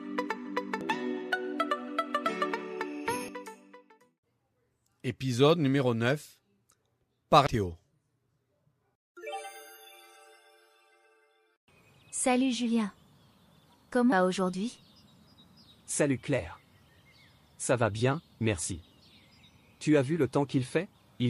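Five brief glitches from damaged data in a compressed stream occur at 0.81, 3.28, 7.47, 14.12 and 20.95 s. At each, corrupted bytes break the decoder's frame sync, so it skips ahead to the next valid header, producing a short chirp or blip in the audio.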